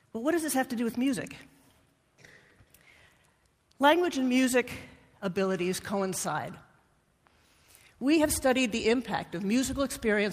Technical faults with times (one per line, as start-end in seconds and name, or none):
none